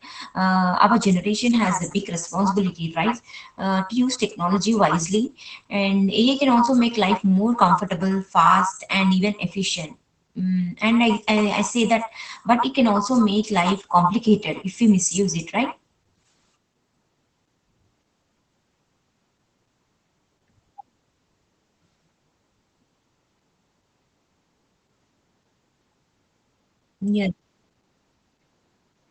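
From start to finish the speech sounds muffled and slightly hoarse, with a faint robotic edge, and nothing reaches above about 8.6 kHz. This is Opus voice compression running in its SILK linear-prediction mode at wideband. The coder keeps the band to roughly 8 kHz and describes the excitation driving each frame only coarsely. That coarse excitation is what roughens the voice. The degree of damage, plainly audible, points to a low bitrate of around 12 kbps.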